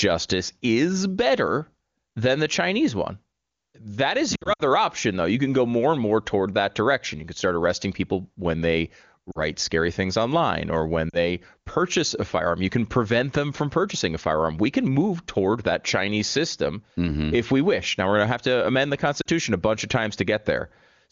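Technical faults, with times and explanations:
4.35–4.62 s, lost AMR speech frames: just before "option though", about 140 ms of speech drops out in scattered gaps over roughly 240 ms, the longest about 60 ms. The wideband decoder fills each gap by repeating the last good pitch and vocal tract settings at falling gain, so the sound smears, fades briefly, and returns weak or rough for a moment.
9.31–9.39 s, 11.10–11.17 s and 19.22–19.26 s, lost AMR speech frames: each is a 40 ms gap, fitting two 20 ms frames. The second falls between "things online or when" and "purchase a firearm", the third between "have to amend the" and "a bunch of". The decoder bridges each gap with the decaying copy described above, which is heard as a short dip or warble.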